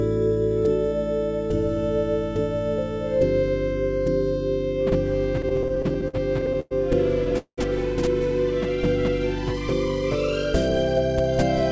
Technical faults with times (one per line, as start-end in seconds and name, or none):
5.42-6.73 repeated stalls (stutter)
7.38-7.59 call audio freeze